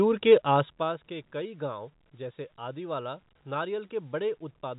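No faults found in the speech; the band tops out near 3.8 kHz, consistent with A-law telephone coding, and the level moves only gradually.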